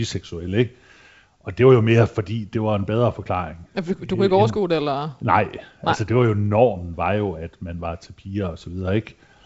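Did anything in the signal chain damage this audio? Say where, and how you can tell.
No, nothing in the signal chain damaged this audio.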